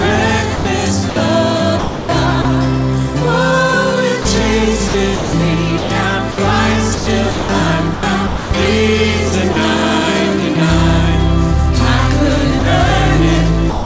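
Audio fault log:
0.56–1.16 s, 1.79–2.45 s, 4.88–6.38 s, 6.95–8.51 s: sound chopped by the voice detector. The sender's detector likely toggled repeatedly, swapping parts of the sound (about 0.15, 0.33, 0.42 and 0.63 s) for comfort noise, so it turns choppy.
4.22–4.25 s, 9.53–9.56 s, 12.59–12.62 s, 13.70–13.86 s: sound dropped by the voice detector. The detector likely took quiet sound for background and stopped sending, so brief 30 ms gaps, and a final 0.16 s one, fill with steady synthetic noise, all band-limited below 8 kHz by the G.722 call path.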